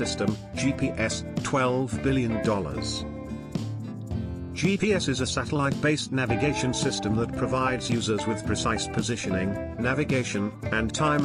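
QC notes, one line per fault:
No faults found in this clip.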